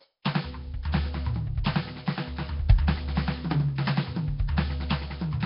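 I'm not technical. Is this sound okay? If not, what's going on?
No. Throughout, the music sounds rough, hissy and murky, with nothing above about 5.3 kHz, likely from Nellymoser compression, an old low-quality codec from Flash. At 1.64 s a sharp hit is smeared, with a brief hiss just before it. This is pre-echo: the codec's noise leaks into the quiet moment before the attack.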